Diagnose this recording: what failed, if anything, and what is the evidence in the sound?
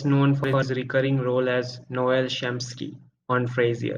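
Nothing in the signal chain failed: the speech signal comes out of wiring, conversion, buffering, processing, transmission, storage and playback intact, with no audible interruptions, distortions or level anomalies at any point.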